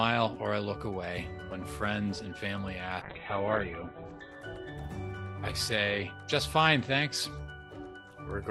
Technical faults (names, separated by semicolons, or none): call bitrate drop